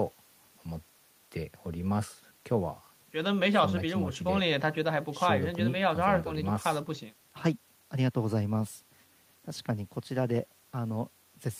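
No technical faults can be heard in this recording.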